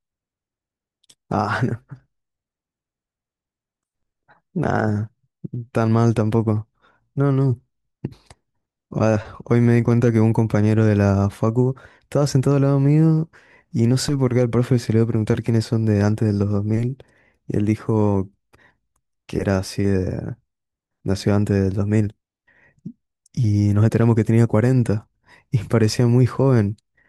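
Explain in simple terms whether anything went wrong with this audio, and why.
Nothing went wrong with this speech recording that a careful listener can pick out. At no point does a technical problem interrupt or change the sound.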